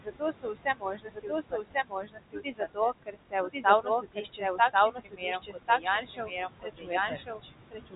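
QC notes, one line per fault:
Throughout: doubled audio track. There's a second full-band copy of the speech running roughly a second behind the original, at about the same level, so every phrase comes back on top of the next one. It's dry, with no decay or room colour, so it isn't an echo off the walls. It's most likely a second capture path or an edit stacking two copies out of step.
Throughout: noise suppressor artifacts. The suppressor pulls the steady room noise down by about 20 dB between phrases and lets it back up under the speech, so the background pumps in and out with the talking. That room noise sits only about 9 dB below the speech, so the suppressor is working hard.
0.04–2.79 s, 3.03–3.65 s, 3.82–4.75 s, 4.91–7.95 s: speech cut by the noise suppressor. In each of these stretches the suppressor mistook parts of the speech for noise and turned them down along with the background, by about 20 to 22 dB at the deepest. 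The first and last runs lose roughly two seconds of speech each, and the middle two about half a second or less each. Soft consonants and word endings come out swallowed or faint.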